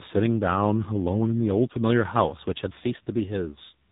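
Throughout the clip, the speech shows tandem speech coding. It was decoded and re-encoded at link borders, passing through two speech codecs in sequence, the last consistent with low-rate AMR-NB. Each coder works on the previous one's errors, leaving the sound rough, muffled and warbly, with nothing above 3.8 kHz.

From 2.31 to 3.47 s, a drift correction step is audible. Playback runs 6.4% faster, and pitch rises 107 cents, just over a semitone, before both snap back. The likely cause is clock-matching software changing the playback rate in one step to rebalance its buffer.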